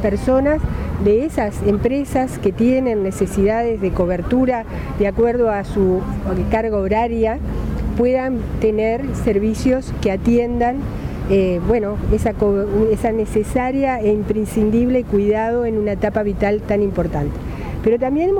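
Nothing here stands out as a fault; the audio just runs along without any glitch, dropout or other technical hiccup to point to.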